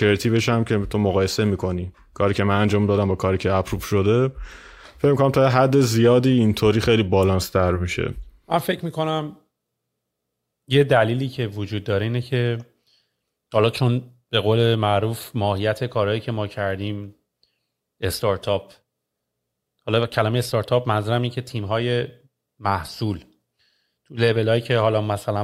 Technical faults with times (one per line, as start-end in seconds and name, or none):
none